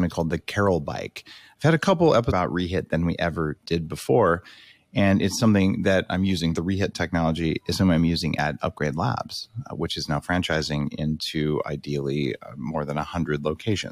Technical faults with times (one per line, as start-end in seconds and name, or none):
2.30 stream segment skipped